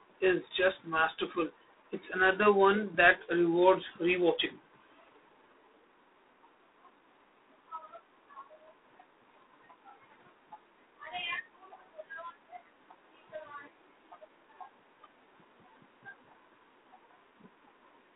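From start to finish the speech has passed through G.726 ADPCM coding at a low rate, which points to the 24 kbit/s mode, where each sample keeps only 3 bits of difference from the coder's running prediction. The coarse steps leave a harsh, rasping hiss that rises and falls with the speech level. The line band runs from about 250 Hz to 3.7 kHz, and nothing above 3.8 kHz survives, so the sound is thin and dull on top.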